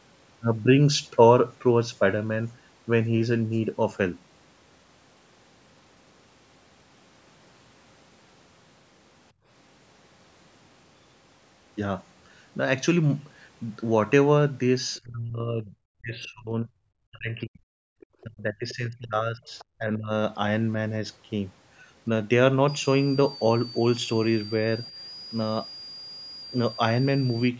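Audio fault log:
9.32 to 9.47 s and 17.89 to 17.95 s: background gated by the echo canceller. While the loudspeaker was active, the canceller pulled the microphone path down hard, so the room sound abruptly falls away and then returns once the canceller releases. The first dip lasts about 150 ms and reaches about 22 dB. The second is shorter, well under a tenth of a second, but deeper, at about 40 dB.
14.98 to 17.61 s, 18.23 to 20.11 s, and 24.91 to 24.95 s: speech suppressed in double talk. The talker's speech sinks in these spans, most likely because both ends were talking at once and the echo canceller could not separate the near voice from the loudspeaker echo, so it attenuated both. In the first two spans, roughly 2 s and 1.5 s of speech are affected, with drops of around 30 dB. The last is a brief dip of around 5 dB.
18.00 to 18.23 s, 18.69 s and 19.59 s: other side's voice leaking through. 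Fragments of a second voice sit under the talker, which is likely residual loudspeaker echo that the canceller did not fully remove from the microphone signal. The first scrap is around 30 dB below the talker's speech, the one at 18.69 s is around 20 dB below, and the one at 19.59 s is around 25 dB below. The last two fall inside the double-talk suppression span.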